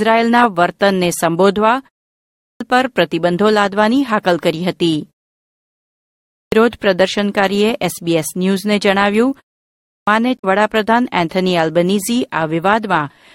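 At 2.22 s, 6.17 s and 9.67 s, speech resumes with a clipped start after a pause. After quiet gaps of about 0.41 s, 1.13 s and 0.34 s, the output device has dropped into a sleep state and needs time to wake and relock, so the opening of each phrase is lost: roughly 0.39 s, 0.35 s and 0.40 s respectively. Each phrase therefore begins abruptly out of silence, already partway in and missing its first sounds.

From 10.36 s to 10.45 s there is damaged data in the compressed stream. Corrupted bytes make the decoder misread or reject the affected frames, lose sync and hunt for the next valid frame header. The result is a short chirp or blip lasting under a tenth of a second.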